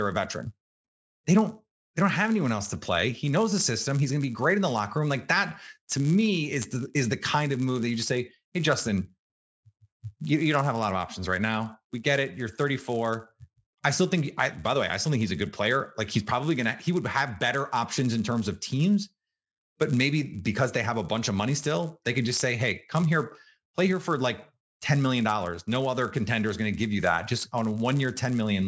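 Resampler restarted on every block, throughout the clip: the rate converter, consistent with a 48 kHz to 16 kHz conversion, treated each 10 ms block as if it stood alone. At every block edge it lacked the true neighbouring samples, leaving a small error at each boundary. Because the blocks are so short, these errors fuse into a steady 100 Hz buzz that rides on the speech and drops away in silent gaps.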